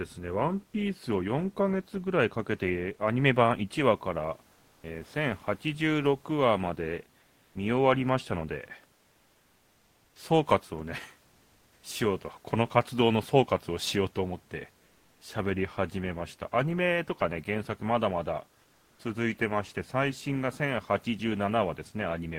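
Speech, with room noise about 39 dB below it. Comfort noise replaces the real background at 4.57–4.81, 7.21–7.51, 14.89–15.19 and 18.61–18.97 s. It is a smoother noise, about 6 dB quieter in the first gap. Likely discontinuous transmission. At 4.78–4.81 s, the onset is clipped by the voice detector. About 30 ms is missing, so the sound starts abruptly, likely because the detector reacted late.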